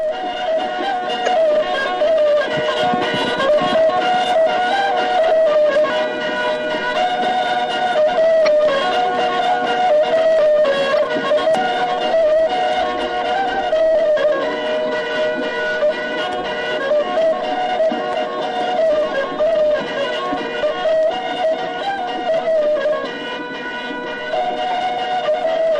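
Throughout, the audio carries plainly audible coding damage with a watery, swirling quality, which fits MP3 compression at about 64 kbps. Too few bits leave the encoder dropping weaker frequency lines that flicker on and off from frame to frame.

At 1.24 to 1.28 s there is a burst of damaged data in the compressed stream, where the decoder misreads corrupted frames for about 40 ms. At 5.90 s the sound jumps ahead by about a third of a second, likely a dropped buffer (overrun), with the two sides spliced directly and no silence between. Further stream damage follows at 8.44 to 8.48 s and 10.96 to 11.00 s. At 11.55 s there is another overrun skip of about a tenth of a second. A shorter corrupted patch occurs at 13.93 s. Further overrun jumps come at 20.63 s, losing about a third of a second, and at 24.98 s, losing about a tenth.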